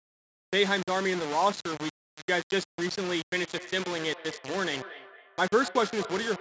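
The speech was likely reduced to very few bits, around 4, by plain rounding with no dither. The error tracks the speech, so the whole clip sounds grainy and gritty, with distortion sitting only a little below the voice and shifting as it changes.

From 3.36 s to 6.40 s, two devices on the same call form a feedback echo loop. One plays what the other's microphone sent, and that microphone picks it up again. The speech returns roughly every fifth of a second as thin, ringing repeats, peaking about 15 dB below the voice.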